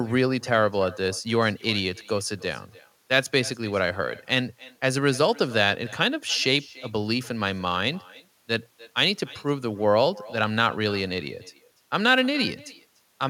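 From start to finish, the speech carries an echo with no canceller. The far end's loudspeaker feeds its microphone, and nothing strips that out. Each phrase returns about a third of a second later, roughly 22 dB down and thin.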